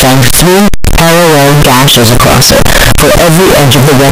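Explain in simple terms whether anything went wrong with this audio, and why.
Float read as integer, running the whole way through, from the start to about 4.1 s. The speech comes out extremely loud and harsh, with the waveform flattened into something close to a square shape, and the background noise sits as loud as the talking. The likely cause is that samples stored as decimal (floating-point) numbers were read back as plain whole numbers, which fits 32-bit float data opened as 32-bit integer. The pitch of the speech can still be followed.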